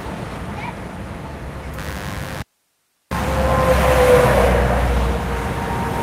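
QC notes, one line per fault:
1.78–4.26 s, mains buzz: A raspy 50 Hz buzz sits about 15 dB below the sound, with sharp switching spikes twice per cycle spreading harmonics up to several kHz. On a spectrogram it shows as a dense comb of evenly spaced horizontal lines.
2.42–3.11 s, audio dropout to a faint residue: The sound cuts out abruptly for about 690 ms, leaving only hiss roughly 45 dB down, likely from the signal being lost while the downstream path stayed live. The waveform collapses to a thin noise band, and the spectrogram shows a sharp-edged gap.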